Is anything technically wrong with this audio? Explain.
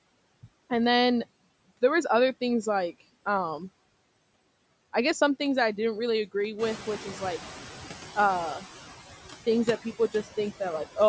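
Yes. Two noise suppressor faults are audible in this speech.

Noise suppressor artifacts run throughout. The suppressor cuts bands it judges to be steady noise by about 20 dB, frame by frame. The background sinks between words and swells beneath them.

The noise suppressor catching up is heard from 6.58 to 8.05 s. The room noise jumps by about 11 dB around 6.5 s, and the suppressor's noise estimate lags. For 1.47 s the noise passes with only about 10 dB of reduction, then sinks as the estimate adapts.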